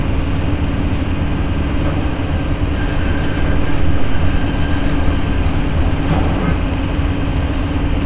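No technical faults can be heard anywhere in this recording of sounds.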